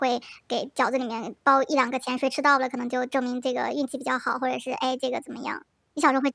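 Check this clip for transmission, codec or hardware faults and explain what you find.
The speech runs fast and sits noticeably high from start to finish: it moves about 1.38 times quicker than natural and is raised by roughly 5.55 semitones, giving a chipmunk-like, hurried quality. This is a wrong sample rate fault. The samples are being clocked out faster than they were captured, with no conversion in between, so timing and pitch shift together by the same ratio. That ratio fits audio recorded at 16 kHz but played back at 22 kHz.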